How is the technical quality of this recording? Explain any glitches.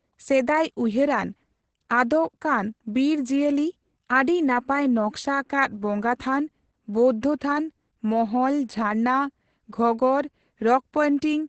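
The recording is heavily degraded by Opus voice compression across the whole clip. Nothing reaches above about 8.6 kHz, as the coder keeps only a wideband signal. Coarse linear-prediction coding, which fits a rate near 10 kbps, leaves the speech muffled, hoarse and slightly robotic. That roughness sets it apart from a simple low-pass filter.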